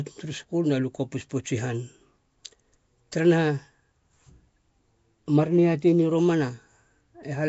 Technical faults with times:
0.00-7.49 Nellymoser compression

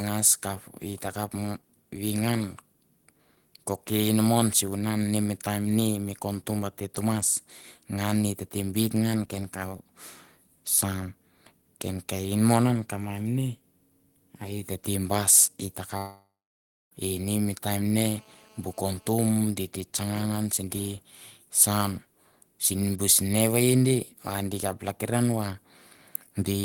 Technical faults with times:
15.97-16.93 long network dropout
17.95-19.09 GSM phone buzz

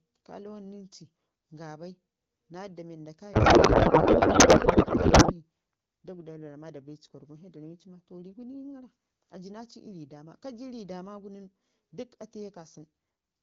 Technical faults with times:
3.33-5.33 codec payload misread

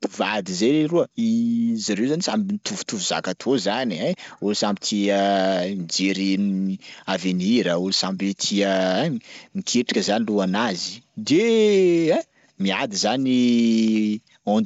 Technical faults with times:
none

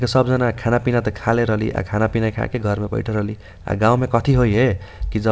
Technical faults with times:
none

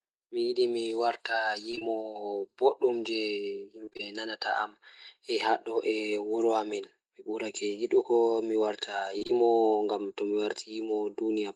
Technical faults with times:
1.71-1.83 short concealed packet loss
3.85-4.01 repeated packet loss (robotic sound)
9.19-9.31 short concealed packet loss

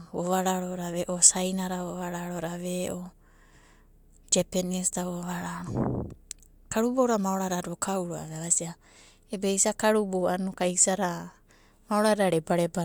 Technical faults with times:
none

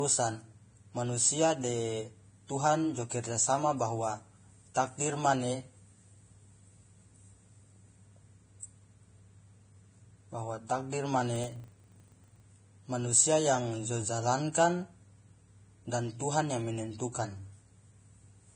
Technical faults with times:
0.00-18.55 Vorbis compression
4.74 pre-echo
11.36-12.47 filter restarted on every block

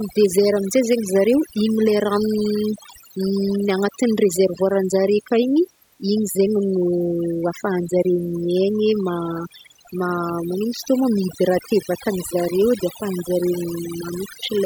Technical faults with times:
0.00-14.66 overdone noise removal

